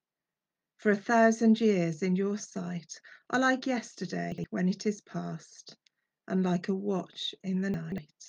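A brief jumbled moment at 4.32 to 4.44 s, and a longer scrambled patch at 7.74 to 7.98 s, are chunks out of order. The audio is cut into 60 ms chunks. At 4.3 s one chunk plays a chunk late, swapping two neighbours; at 7.7 s a chunk lands three chunks late. Nothing is missing, but each misplacement leaves hard joins.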